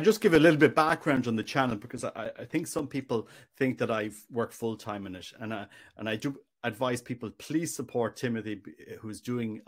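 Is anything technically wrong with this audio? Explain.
Yes. From 0.35 to 3.33 s, between "just give" and "think that I work", the speech carries CD scratch ticks: twelve short ticks, the longest only a few milliseconds. A surface blemish wipes out more data than error correction can rebuild, once per disc rotation, so the player briefly interpolates or mutes samples. The ticks come at a steady four or so per second, and that rotation-locked regularity separates them from the random, uneven crackle of a worn vinyl record.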